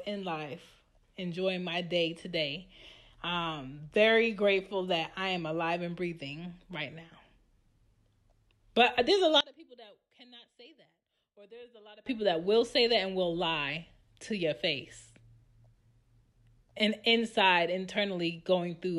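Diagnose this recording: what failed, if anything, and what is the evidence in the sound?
From 9.41 to 12.06 s the speech nearly vanishes, dropping about 28 dB: likely one channel inverted in analogue wiring, so mono summing cancels it.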